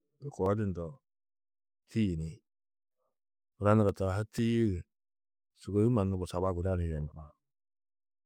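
From 0.46 to 4.38 s, periodic USB or driver dropouts recur every 0.49 s. Each skips around 10 ms of speech, leaving about ten evenly spaced ticks.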